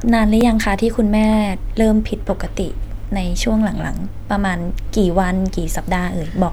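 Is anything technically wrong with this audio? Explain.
Yes. At 0.41 s the speech has a repeated buffer fault: fresh audio didn't reach the output in time, so the device played its previous chunk once more. The repeated piece is about 5.8 ms long, which fits a 256-sample buffer, and essentially nothing is lost, just a tiny duplication. It's heard as a brief click or buzz rather than a stutter. A waveform shows an identical short segment twice, with a hard discontinuity at the join. A spectrogram shows a thin vertical broadband line there.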